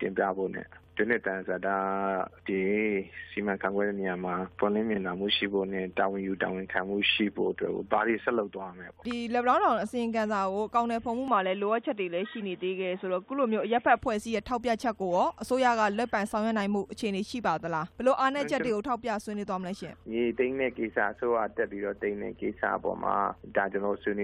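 Chunks out of order at 4.94 to 4.98 s: a 20 ms piece of audio lands one chunk late and plays after the piece that should follow it. Nothing goes missing, but the swap leaves hard joins, heard as a brief jumbled flick.

Input switched to a poorer device from 11.28 to 13.97 s: the sound abruptly turns dull and boxy, with nothing above 3.8 kHz, a level shift of about 5 dB and a faint new noise floor well below the signal. It then clears again, likely a change to a narrower-band input.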